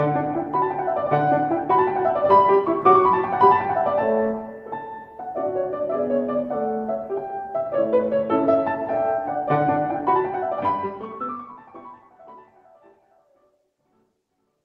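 Nothing technically wrong can be heard in this audio. A smooth fade-out starts around 10 s and carries the level gently down to the end, without a click or hard edge.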